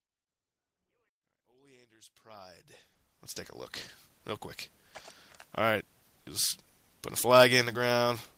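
From 2.62 to 3.83 s there is repeated packet loss (robotic sound). Eleven gaps, none longer than 20 ms, were patched by extending the preceding sound, about 120 ms in total or roughly a tenth of the stretch. Unlike a single dropout, the patches recur in close succession, so the choppiness persists across the whole span, overlapping the smooth fade-in until it finishes rising at about 3.66 s.

At 4.19 to 4.21 s comes one short concealed packet loss: 10 ms of audio never arrived and was filled by continuing the last sound before blending back. Being a single isolated patch, it registers as a brief smear rather than a sustained choppy texture.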